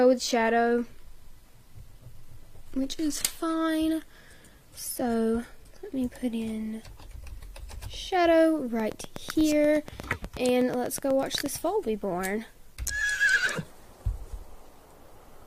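For the first 6.0 seconds the player is on an adaptive stream starting at a low bitrate. It grabs a cheap rendition to get going fast, and what you hear points to something like 24 kbit/s HE-AAC. Treble is thin and partly synthetic, with nothing above 14.9 kHz, and coding artefacts are obvious. At 6.0 s it jumps to a better version, which fits roughly 96 kbit/s AAC-LC. The sound opens up suddenly, with no gap.

From 8.80 to 11.47 s there's a train of clicks: about twenty sharp ticks, evenly spaced at 8.26 per second, each much the same shape and peaking about 10 dB above the surrounding audio. They sit on top of everything, pauses included. The likely culprit is a repeating pulse from nearby equipment interference or a faulty connection or power supply, rather than anything in the source.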